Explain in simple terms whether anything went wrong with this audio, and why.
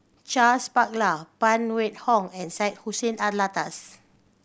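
Nothing went wrong here.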